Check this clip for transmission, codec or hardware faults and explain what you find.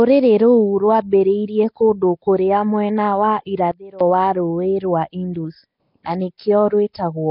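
Two faults are audible: a codec-type degradation across the whole speech clip and a brief drop in level near the middle.

Nellymoser compression affects the entire clip. The sound is heavily damaged, with a rough, hissy halo around the speech, a smeared, underwater quality, and nothing above 5.3 kHz. The likely cause is Nellymoser Asao, the old Flash microphone codec, at a low rate that fits roughly 22 kbps. It spends a fixed two bits per sample on 256-sample blocks and fills starved bands with noise. That noise fill is what separates it from ordinary low-bitrate MP3 or AAC. Those codecs tend to leave warbling or swirling tones, while this one leaves a grainy hiss layered over the speech.

A sudden gain jump runs from 3.72 to 4.01 s, just after "kũndũ kũrĩa mwena wa". The level falls by about 20 dB for 0.29 s and then returns. The likely cause is a digital gain or bit-shift change applied from one sample to the next with no ramp. 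Speech and background noise drop together and come back together. That shared drop separates it from a speaker moving away or an automatic gain control, which would change level gradually.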